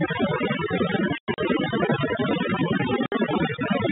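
From the start, the speech carries overdone noise removal. The noise reduction was set too strong. It cuts individual frequency bands whenever they sit near its noise estimate. Quiet parts of the speech are cut along with the hiss. The background falls to near silence, dotted with twinkling specks. This runs for the whole clip, over the narrow telephone band of the G.711 line.

From 1.18 to 1.38 s comes packet loss filled with silence. About 140 ms of sound drops out across those 200 ms. The longest single hole is 100 ms. The gaps come in steps that fit 20 ms packets. Each hole is pure silence with hard edges, so the speech is chopped. At 3.06 s a second hole opens, lasting 60 ms until 3.12 s. It has the same hard edges.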